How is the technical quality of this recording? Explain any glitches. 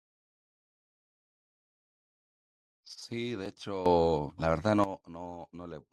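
The recording has two glitches in the speech.

At 3.46 s there is an overlap between stream segments. Two segments, which fit a 2-second segment length, claim the same few milliseconds. The player trims that overlap, so a sliver of real sound disappears. The waveform jumps, giving a tiny skip.

From 3.86 to 4.84 s there is a sudden gain jump of about 12 dB. Speech and background noise get louder together, then drop back. The likely cause is a gain change applied instantly, with no ramp. Both edges can click.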